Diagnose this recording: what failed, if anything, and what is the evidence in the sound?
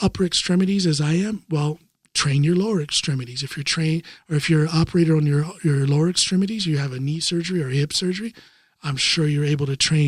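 Nothing in the recording points to a failure at any stage of the chain. No event in the sound can be placed in time or traced to a mechanism.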